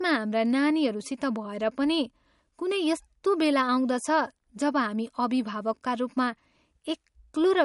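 A low-bitrate MP3 encode was likely re-saved at a high bitrate, so low-bitrate audio saved at a high bitrate leaves the speech dull, with nothing above 11.2 kHz throughout. From 0.16 s to 7.57 s, two unsynchronised device clocks, likely drifting by roughly 200 ppm, drop or repeat single samples. These clock slip clicks come as faint regular ticks about ten times a second.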